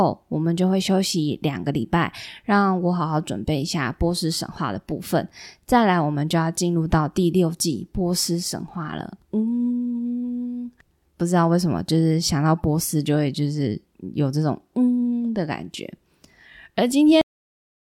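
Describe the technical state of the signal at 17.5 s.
At 17.5 s the signal is in digital silence caused by a cut-off end. The speech stops abruptly at 17.21 s and nothing follows through to the end of the clip. The final stretch of audio was never written out, so the sound is severed partway through with no decay or room tail. A dropout would resume afterwards and a natural ending would trail away, but here the cut is instantaneous and the silence is permanent.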